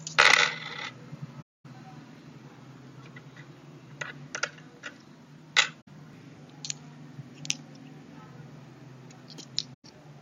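AAC frame loss with muting occurs at 1.42 to 1.66 s (about 235 ms), 5.81 to 5.88 s (64 ms) and 9.74 to 9.85 s (about 107 ms). Zeroed frames leave soft-edged gaps as overlapping windows fade the sound out and back in.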